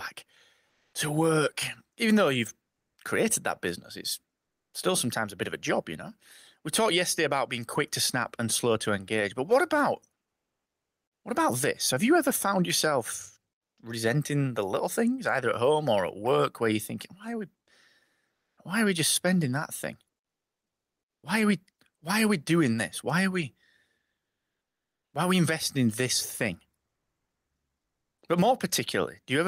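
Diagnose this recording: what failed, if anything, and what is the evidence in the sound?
Comfort noise in place of the background, a codec fault: 0.69–0.93 s before "to work" and 18.35–18.57 s before "why are we just" the background becomes a steady, featureless hiss, shifting about 4 and 3 dB. The likely cause is discontinuous transmission. A noise gate would leave silence there instead.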